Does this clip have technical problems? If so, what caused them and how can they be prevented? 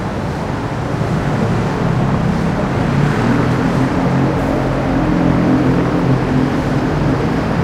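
No, nothing technical goes wrong anywhere in these sounds, so there's no cause to track down and nothing that needs preventing.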